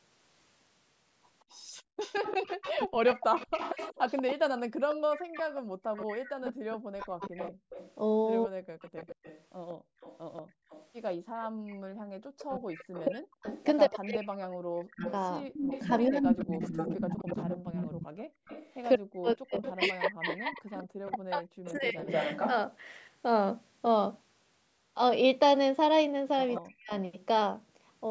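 From 1.51 to 22.52 s a second copy of the speech trails the first by 187 ms. It sits about 10 dB below the main voice. This is an echo leak. The far side is likely playing the call on a loudspeaker, and its echo canceller let part of that sound back into the microphone.

At 1.71 to 1.98 s the room sound falls away abruptly, by about 34 dB. It comes back within roughly a third of a second. The same dip returns from 5.54 to 6.4 s and from 9.76 to 11.51 s, by about 35 dB each time. This is background gated by the echo canceller. While the loudspeaker played, the canceller turned the microphone down hard. The ambience drops to near silence, then snaps back.

From 2.84 to 21.98 s the talker's voice keeps sinking and breaking up. It falls as much as about 40 dB, for some seven seconds in total. This is speech suppressed in double talk. It likely happens while both sides speak at once. The canceller could not tell its own talker from the loudspeaker echo, and turned both down. 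Syllables go dull or vanish in pieces.

Both faults return briefly near the end. From 26.55 to 26.95 s the echo leak comes back at the same 187 ms delay, about 15 dB down. From 26.6 to 26.91 s the voice is again cut by about 40 dB.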